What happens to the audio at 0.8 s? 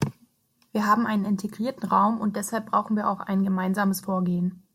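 Nothing goes wrong at 0.8 s: the audio is intact there, with no dropout, click, distortion or other fault.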